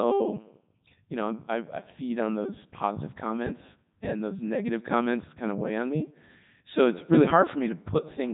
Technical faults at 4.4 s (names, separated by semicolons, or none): Codec 2 vocoder